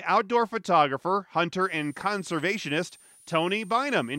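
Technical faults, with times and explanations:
1.61 s to end: switching supply whistle, a power supply falling into audible burst mode, adding a high whistle drifting between 7.95 and 9.67 kHz, about 30 dB below the speech.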